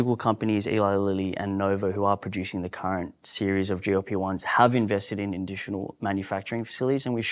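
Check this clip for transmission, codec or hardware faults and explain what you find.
Nothing in the recording stood out as a problem on listening.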